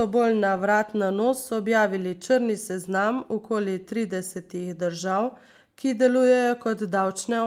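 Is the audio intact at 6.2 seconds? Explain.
Yes, the speech at 6.2 seconds plays through intact, with no dropout, click, distortion or other fault at that moment.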